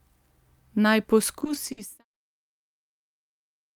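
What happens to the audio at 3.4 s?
At 3.4 s the audio is intact, with no fault.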